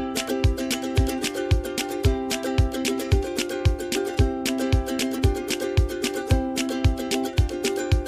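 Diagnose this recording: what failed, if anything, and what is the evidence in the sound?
Nothing stood out on listening; no stage of the chain gives itself away in the sound.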